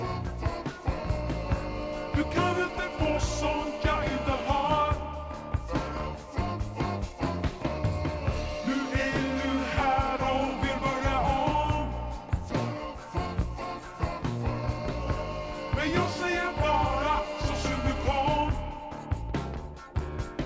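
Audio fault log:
throughout, wrong sample rate: the whole clip sounds slow and heavy, running at 0.73 times normal speed and 5.55 semitones low, with tempo and pitch falling together, which fits audio captured at 22 kHz being played back at 16 kHz without conversion.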